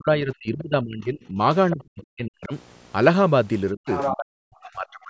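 Speech suppressed in double talk at 0.0 to 1.4 s, 1.73 to 2.53 s, 3.71 to 3.88 s and 4.11 s to the end. The speech sinks by about 25 dB at first and by about 40 dB later. This is likely an echo canceller turning both talkers down at once. The other side's voice leaks through from 3.89 to 4.17 s, a second voice only about 5 dB below the speech. It is likely loudspeaker echo that the canceller left in the microphone signal.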